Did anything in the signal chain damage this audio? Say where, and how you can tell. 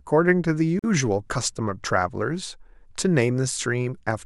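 Yes. The damage is at the codec stage, where separately encoded pieces were joined: a gap at a join of encoded pieces. At 0.79 s the speech drops into a silence of about 46 ms, ending at 0.84 s, with smeared edges, and then resumes exactly where it stopped. Each encoder run leaves its start-up delay and the padding of its last frame in place, and butting the pieces together untrimmed opens this hole in otherwise continuous sound.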